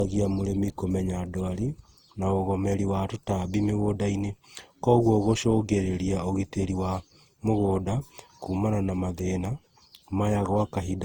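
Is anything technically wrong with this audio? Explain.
Yes. Throughout the speech there is generation loss: a swirly, smeared, hollow quality beyond what a single pass at this bandwidth would give, with blurred consonant attacks. This likely comes from repeated lossy re-encoding, consistent with Opus around 48 kbit/s applied roughly seven times, each pass adding fresh quantisation noise and spectral holes.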